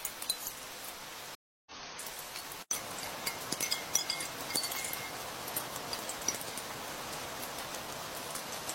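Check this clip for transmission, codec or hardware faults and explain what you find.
One transmission fault is present: a stream reconnect from 1.35 to 1.72 s. The connection dropped and the player restarted a fresh decoder mid-stream. The sound cuts to about 311 ms of silence, then resumes roughly 0.2 s further on, with that span lost.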